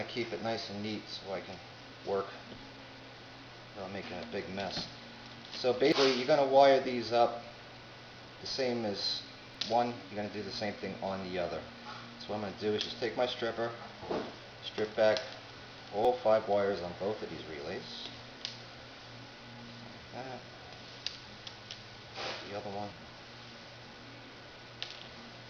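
At 5.92, 9.55, 16.05 and 22.92 s, compressed frames are skipped. Whole blocks of the coded stream were either missing or rejected by the decoder, so playback jumps forward instead of pausing. Roughly 0.2, 0.3, 0.1 and 0.3 s of audio go missing at those points, which fits the loss of one to three frames of about 93 ms each. At each join the audio continues from a later point with a sudden discontinuity.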